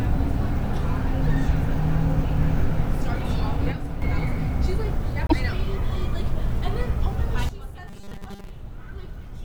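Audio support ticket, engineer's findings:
Level drops abruptly by about 6 dB at 3.72 s and recovers at 4.02 s, with background noise stepping down and back up together. Also a hard drop of about 13 dB from 7.49 s to the end. Both are sudden gain jumps, likely a digital gain change applied between adjacent samples with no ramp.

Brief glitch at 5.27 to 5.33 s, with the audio skipping ahead. Likely a broken MP3 bit reservoir: frames lost, so the next frames pull borrowed bits from the wrong frame. The span covers a few 24 ms frames.

Metallic buzz pinned at 200 Hz from 7.88 to 8.51 s, inside the quieter section, still tracking the sound's rough shape. Robotic sound from repeated short buffers, likely from starved input. A 5 ms block is repeated, and most of the real audio there is skipped.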